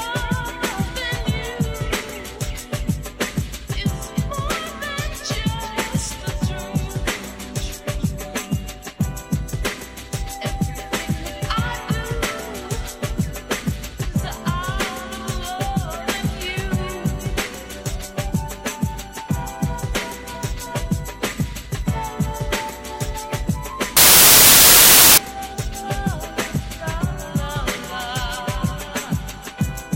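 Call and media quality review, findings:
Samples built from the wrong bytes, 23.97 to 25.18 s. Loud, harsh broadband noise replaces the audio for about 1.2 s. Probable component: sample reader or decoder framing. Bytes misaligned or swapped, so fast-changing low bits become the large part of each sample.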